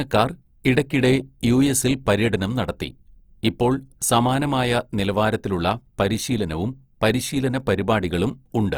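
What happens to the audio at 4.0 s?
At 4.0 s the speech carries the same Opus compression damage heard across the whole clip. It is plainly audible: tonal parts turn grainy, rough and noisy, yet the band stays full, reaching up to 20.4 kHz. The likely cause is Opus in its music mode at a rate that fits around 24 kbps, filling starved bands with folded or noise content rather than leaving gaps. That is why it sounds rough instead of the swirling, watery holes of MP3.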